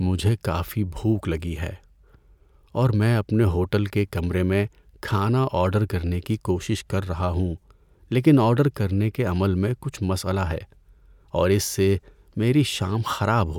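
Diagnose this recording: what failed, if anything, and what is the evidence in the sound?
Nothing in the signal chain has failed: the speech runs continuously with no dropouts, level jumps or added noise from any capture, conversion, processing, transmission or playback stage.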